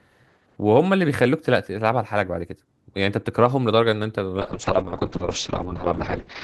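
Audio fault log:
4.38–6.43 s, call bitrate drop: From 4.38 s to the end, the Opus encoding falls from full quality to a much coarser, rough and watery sound, which fits the encoder being pushed from around 32 kbps to about 6 kbps. The bandwidth narrows to 8 kHz, so the sound turns muffled. On a spectrogram, energy above 8 kHz cuts off abruptly at 4.38 s, and what remains looks blotchy and smeared, with a flat top edge.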